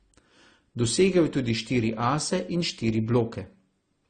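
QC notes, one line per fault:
throughout: transcoding between lossy codecs. The speech sounds dull, with nothing above 9 kHz, and two kinds of artefacts overlap. This likely comes from a low-bitrate Opus encode re-encoded as AAC-LC, each pass adding artefacts while keeping the cut-off.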